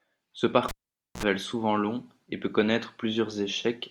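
At 0.69 s the speech is cut by a sharp pop as a live cable is pulled and plugged in again. About 0.50 s of near silence follows while the connection is open. Just before the signal returns at 1.23 s, a 54 ms burst of 60 Hz mains buzz marks the plug tip touching first, and a second pop closes the gap. The pops and the hum set this apart from a plain digital dropout, which would fall silent cleanly.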